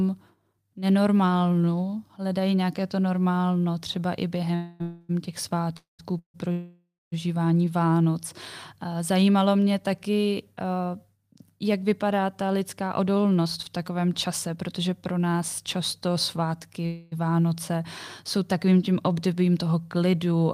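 After "to normálno třeba i", packets were likely held up and the jitter buffer ran dry, giving a call audio freeze at 4.55–4.82 s and 4.82–5.11 s. Further freezes follow at 5.77–6.01 s, 6.19–6.36 s and 6.52–7.14 s. Each one stretches the last sound into a fading buzz, with the final three dropping to silence. The audio then resumes where it stopped, with nothing lost.

From 12.43 to 15.41 s, a jitter buffer speed-up trims excess delay by cutting pitch-period slices, about a fifth of a second in total. The audio runs about 7% faster at unchanged pitch and sounds hurried.

After "často svátky", another freeze at 16.86–17.14 s holds and buzzes before the audio carries on.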